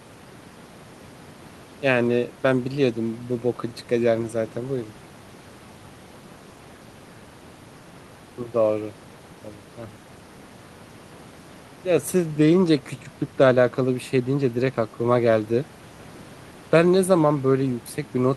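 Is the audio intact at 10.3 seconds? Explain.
Yes, the audio is intact at 10.3 seconds, with the speech running through that moment without any dropout, click, distortion or other fault.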